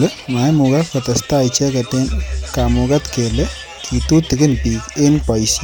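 No audible technical faults: the speech runs without dropouts, glitches, distortion or level jumps.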